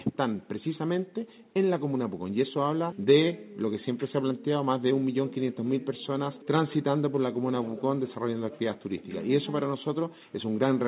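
The signal is intact and narrowband, with nothing above about 4 kHz and the lowest bass trimmed, which fits a standard G.711 mu-law telephone-quality call path at 64 kbps.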